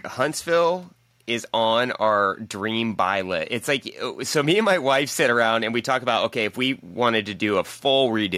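A speech recording with nothing technically wrong with it.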